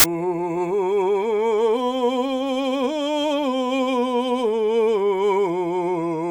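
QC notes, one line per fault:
0.00–0.04 s, file tags played as audio: an embedded cover picture's compressed data was decoded as samples, giving a hard-edged burst of very loud white noise before the music.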